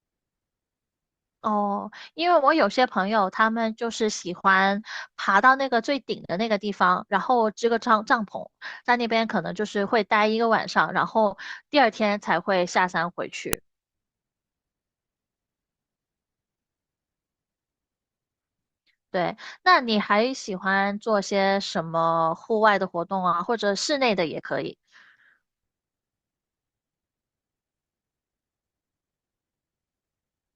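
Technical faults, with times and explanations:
13.53 s, file header played as audio: a separate WAV piece was joined with its header intact, so those header bytes play as samples, giving a sharp, loud click.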